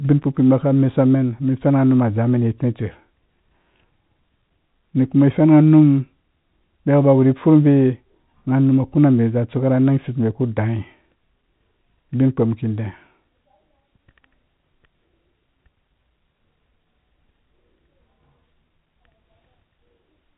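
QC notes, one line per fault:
No faults found.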